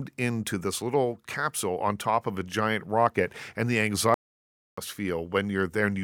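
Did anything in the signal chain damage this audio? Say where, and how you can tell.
Yes: the speech cuts to silence from 4.14 to 4.78 s, about 0.63 s, then resumes. This is a playback stall, likely the player starving for data.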